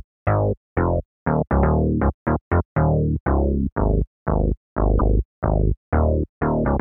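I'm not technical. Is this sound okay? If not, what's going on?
No. A short run of repeated frames was stored twice, so at 4.98 s the same sixth of a second plays again, causing a brief stutter.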